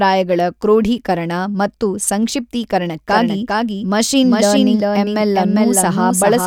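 From 3.09 s on, a doubled audio track sounds like a dry echo that starts abruptly. A copy about 5 dB quieter, roughly 400 ms late and likely from a second capture path, shows as offset duplicate waveform bursts.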